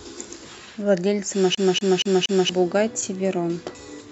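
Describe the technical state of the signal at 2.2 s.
At 2.2 s the speech is caught in a CD stuck on one turn (1.55 to 2.49 s): the laser jumps back, replaying one 0.24 s slice four times. The spectrogram shows identical repeating blocks separated by brief silent gaps.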